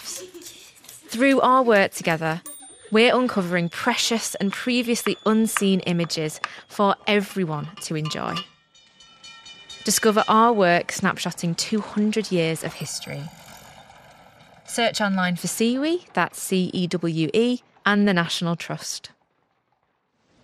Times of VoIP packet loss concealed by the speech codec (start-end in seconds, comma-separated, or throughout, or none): none